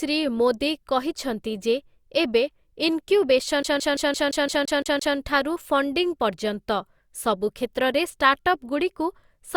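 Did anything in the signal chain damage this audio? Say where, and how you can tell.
Yes. A CD stuck on one turn, at the playback stage, runs from 3.63 s to 5.17 s. The same 0.17 s fragment of speech plays nine times in a row, each pass separated by a brief mute, producing the rapid, perfectly even stutter of a skipping disc. A scratch knocks the laser back one track at the same point on every revolution, so the pickup rereads one turn's worth of audio until it finally tracks past the damage.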